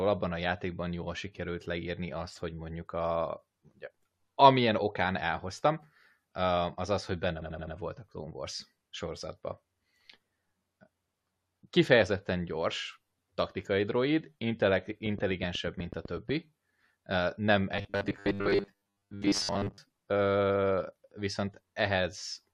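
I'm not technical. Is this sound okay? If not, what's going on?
No, there are three problems. From 7.41 to 7.75 s there's repeated frames: a small 85 ms chunk plays four extra times, so it stutters and runs about a third of a second long.

From 15.06 to 16.30 s you'll hear a train of clicks, about ten steady ticks, roughly eight per second, likely from interference or a faulty connection.

From 17.72 to 19.78 s there's robotic sound from repeated short buffers: the speech turns into a stiff metallic buzz at 100 Hz, likely from a 10 ms bit replaying while most real audio is skipped.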